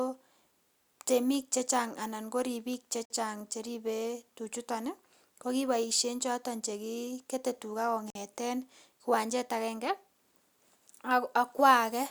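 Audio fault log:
3.05–3.10 s and 8.10–8.15 s: gap between chunks, hard-edged 50 ms silences at joins between 5 s chunks; no speech is lost, but it halts abruptly.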